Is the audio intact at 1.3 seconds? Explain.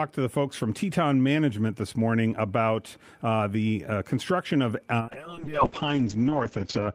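Yes, at 1.3 seconds the audio is intact, with no dropout, click, distortion or other fault at that moment.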